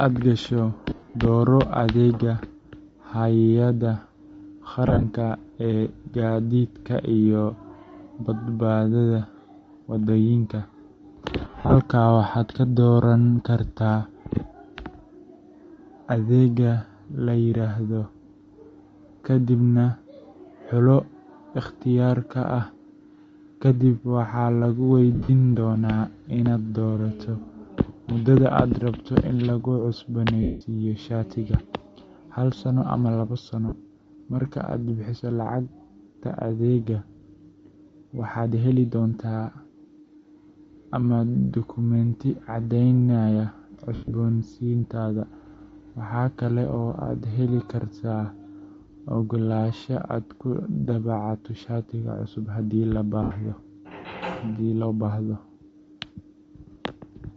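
Throughout the speech there is a grainy, breathy edge with a dulled, noise-filled top end. This is likely Bluetooth LC3 compression. The sound fits a low bitrate near 32 kbps. The encoder drops much of the upper spectrum and fills it with noise.

Lost LE Audio frames occur at 0.89 to 1.15 s, 4.87 to 5.04 s, 11.45 to 11.76 s, 25.15 to 25.30 s, 30.43 to 30.61 s, 33.69 to 33.72 s, 43.95 to 44.13 s and 53.23 to 53.31 s. The decoder repeats the last spectrum with scrambled signs. Each gap becomes a brief noisy smear.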